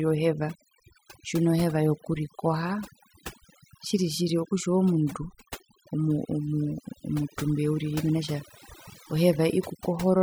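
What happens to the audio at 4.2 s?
At 4.2 s the speech sits over near-silent, twinkling background, from overdone noise removal throughout, which cuts frequency bands resembling noise, taking quiet speech detail too.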